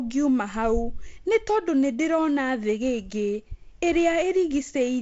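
Listening to this speech recording, carried over G.722 wideband telephone coding, nothing stood out as a technical problem.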